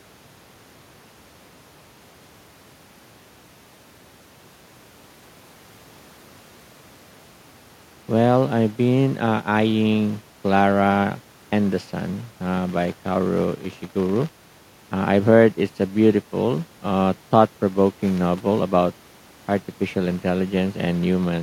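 No technical faults can be heard anywhere in the recording.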